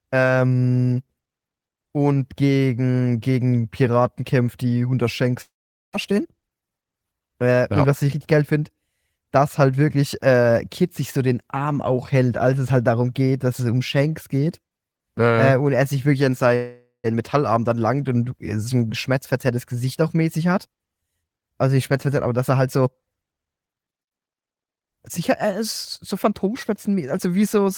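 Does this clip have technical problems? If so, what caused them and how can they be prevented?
Yes. Long network dropouts at 5.41–5.95 s and 16.56–17.08 s: the sound smears into a fading buzz, then goes quiet, and about 0.4 s is lost each time, likely from a network outage. A more stable connection, with forward error correction or redundancy, would prevent this.

Jitter buffer speed-ups at 6.11–6.85 s (114%) and 17.16–18.08 s (109%): after each gap the receiver trims pitch periods to shed roughly a tenth of a second of built-up delay, so the speech sounds hurried at unchanged pitch. A steadier network path, or a buffer that catches up more gradually, would prevent this.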